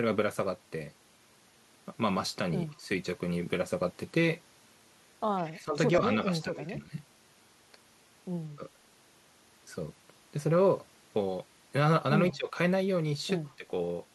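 From 5.43 to 5.54 s there is an echo leak, likely from a far-end loudspeaker whose echo canceller let some of its microphone pickup through. A faint copy of the speech returns briefly, about 150 ms late, roughly 25 dB under the direct sound.

Right after it, from 5.54 to 5.78 s, and again at 6.26 to 6.96, 8.56 to 8.63, 12.33 to 12.56 and 13.58 to 13.66 s, there is speech suppressed in double talk. This is likely an echo canceller that could not tell the talker from echo while both sides spoke, so it turned everything down. The speech dips by around 10 to 15 dB and sounds muffled or chopped. The dip at 6.26 s is the longest, at about half a second.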